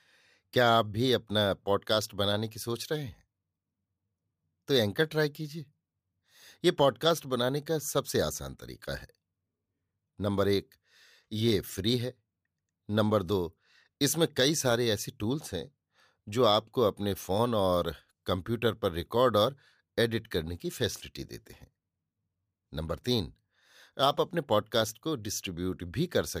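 No technical faults are audible anywhere in the recording.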